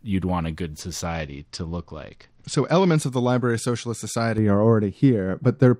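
From 1.05 to 2.96 s the speech goes dull and gritty, the sound of a Bluetooth SBC bit pool drop. When the wireless link came under strain, the encoder cut the bits spent per frame. The highest sub-bands were left almost empty and the rest were coarsely quantised. The degradation fits a fall from a bit pool near 28 to about 9, roughly 78 kbps. On a spectrogram the upper bands thin out or vanish in blocky patches, with granular noise smeared between harmonics, and then recover.

From 4.38 s to the end at 5.79 s, de-emphasis was applied wrongly. A treble cut meant to reverse pre-emphasis landed on audio that had none, or was applied a second time, so the response tilts smoothly downward and sits about 11 dB lower at 10 kHz than at 1 kHz. The speech sounds muffled, as if heard through cloth. A spectrogram shows a gradual fade toward the top rather than a hard edge, and the waveform looks rounder, with softened transients.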